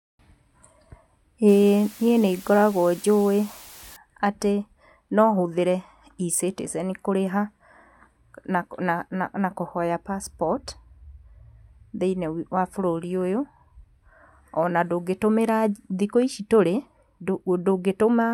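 From 1.48 to 3.96 s the speech drops to low bit depth with dither, about 7 bits, leaving an even white hiss roughly 20 dB below the voice. Unlike undithered truncation, the hiss stays constant through pauses and carries no gritty, signal-following distortion.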